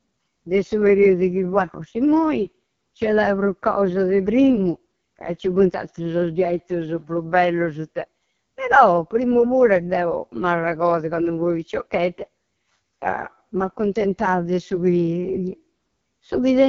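Throughout, the speech carries AMR wideband (HD Voice) codec damage. Heavy rasp and roughness suggest the lowest 6.6 kbit/s rate. Nothing sounds above 6.9 kHz.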